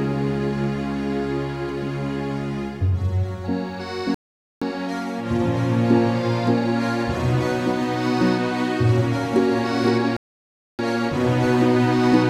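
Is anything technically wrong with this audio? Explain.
Yes, there are two playback stalls, from 4.14 to 4.62 s (about 0.47 s) and from 10.17 to 10.79 s (about 0.62 s). Each time the sound halts mid-flow, falls silent, then resumes, likely because the player ran short of data or its thread was briefly blocked, so output stopped until it caught up. On a waveform each gap is a flat line, and on a spectrogram a blank vertical band with abrupt edges.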